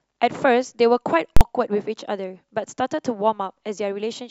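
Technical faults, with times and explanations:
1.37 to 1.41 s, invalid numbers at full scale: a calculation went invalid and pinned the output at full scale for 43 ms, which fits a 2048-sample block, so it's one loud bang.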